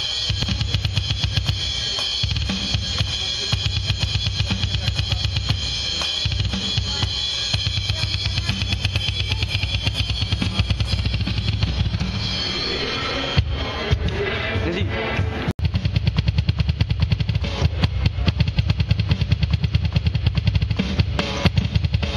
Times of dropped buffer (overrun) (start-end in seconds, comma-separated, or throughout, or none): 0.43, 2.36, 4.09